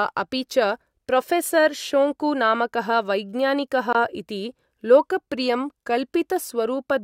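Right after "प्रोफेसर् शोङ्कु नामकः वैज्ञानिकः", at 3.93 to 3.95 s, the speech drops to silence for about 21 ms and then carries on. That's likely a Bluetooth stall: interference delayed packets, the headphone buffer ran empty, and playback paused until resent data arrived.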